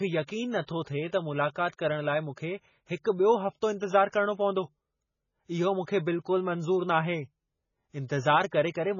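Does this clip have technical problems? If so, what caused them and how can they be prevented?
Yes. Throughout the speech, a starved encoder, likely MP3 compression at a very low bitrate around 16 kbps, has cut everything above 7 kHz and switched weak frequency lines on and off from frame to frame. This leaves heavy watery swirling, dull s sounds and smeared attacks. Encoding at a much higher bitrate, or keeping the recording in a lossless format, would prevent it.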